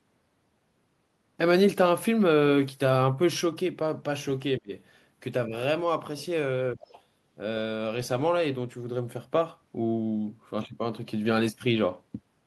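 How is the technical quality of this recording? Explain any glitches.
The recording has brief echo-control glitches, clustered between about 4.6 and 7.0 s.

Speech suppressed in double talk at 4.58–4.72 s, 5.47–5.53 s and 6.76–6.80 s: the talker dips, deeply, slightly, then moderately, likely because the echo canceller muted overlapping speech. Unlike a dropout, the dips coincide with the other side talking.

The other side's voice leaks through at 6.83–7.01 s as a faint second voice well below the talker, likely residual loudspeaker echo. It is a distinct voice, not a repeat of the talker.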